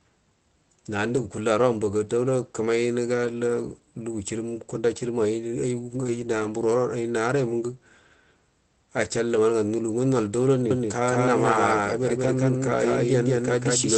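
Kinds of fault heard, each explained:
Lost packet rebuilt from error correction: dropped packets were filled in from low-bitrate copies in the next packet, so there are no gaps, just brief rough, noisy patches, the longest near 6 s.
Doubled audio track: from "nol daula" to the end, an equally loud, dry copy trails about a fifth of a second behind, likely picked up by a second, slower capture path.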